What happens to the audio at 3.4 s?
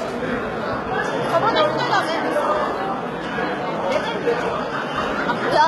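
At 3.4 s the audio carries the same HE-AAC compression artefacts heard across the whole clip. The treble sounds gritty and metallic, with nothing above about 11.7 kHz, and the damage is heavy, which fits a very low bitrate near 16 kbps. The likely cause is spectral band replication: only the lower spectrum is coded, and the treble is rebuilt by copying lower bands upward under a coarse envelope. Its harmonics therefore fail to line up with the real content below the crossover.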